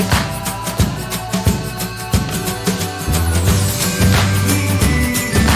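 Nothing stood out on listening; no fault could be heard at any point in the audio.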